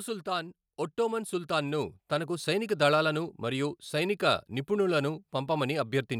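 Automatic gain rising runs from 0.24 s to 3.84 s in this speech recording. The gain control judged the input too quiet and pushed its gain up slowly, by about 8 dB over those 3.6 seconds. Because the whole signal is scaled, the voice and the background noise swell together rather than the voice alone getting louder, and the level has settled higher by the time "సైనిక నిపుణులను" is heard.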